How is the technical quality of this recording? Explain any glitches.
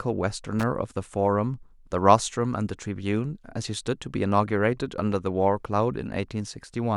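The recording has one glitch, a brief loose connector crackle from 0.59 to 0.63 s. A worn or dirty contact in the signal path briefly lost and regained connection, chopping the speech for about 40 ms and producing a short, ragged burst of crackling scratch.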